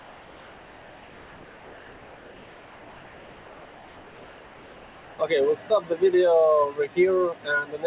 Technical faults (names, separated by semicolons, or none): noise suppressor applied to music or sounds; comfort noise in place of the background